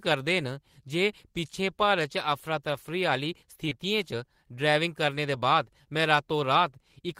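At 3.69 s, running to 3.75 s, the speech shows a short concealed packet loss. About 20 ms of audio failed to reach the decoder in time, and the receiver covered the gap by extending the preceding sound, following its pitch where it was voiced and substituting shaped noise where it was not, before crossfading back into the real signal. The patch, plus roughly 10 ms of blending, is heard as a brief smear or wobble in the speech.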